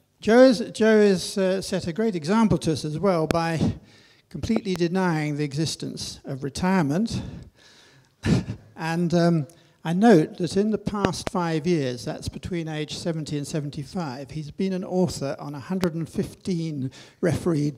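Voltage spikes, likely from a plug, switch or static discharge, are added to the signal, causing loud pops: single ones at 3.31–3.33 s and 15.84–15.86 s, pairs at 4.56–4.78 s and 11.05–11.29 s. Each jumps well above the level of the audio, which continues underneath.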